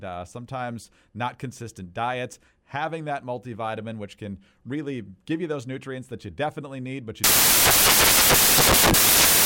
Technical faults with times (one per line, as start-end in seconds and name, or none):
7.24-9.45 samples built from the wrong bytes